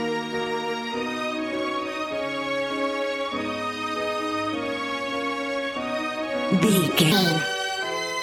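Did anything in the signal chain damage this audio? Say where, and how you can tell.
Yes, there's a section at the wrong speed right at the tail, from 7.12 s to 8.22 s. The last stretch suddenly runs 1.38 times too fast, so everything jumps up by roughly five semitones and sounds hurried and chipmunky, with pitch and tempo shifting together the instant it starts. That pairing points to the likely culprit: a clock mismatch at the editing or playback stage, where that segment was read out at a faster rate than it was recorded at.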